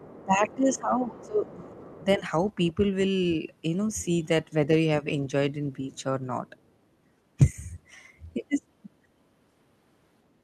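The clip is speech with two echo-related faults. Other side's voice leaking through: a faint second voice sits under the talker from 0.0 to 2.05 s, roughly 25 dB down, and briefly again from 3.9 to 4.05 s, around 30 dB down. It's likely residual loudspeaker echo the canceller missed, showing on a spectrogram as weak, unrelated harmonic traces beneath the main speech. Speech suppressed in double talk: from 0.0 to 2.22 s the talker's level drops in patches totalling about one and a half seconds, at worst by about 20 dB, with a shallow dip of about 5 dB at 7.51 to 7.56 s. These are likely the canceller ducking both voices at once, visible as notches in the waveform envelope and faded bands on a spectrogram.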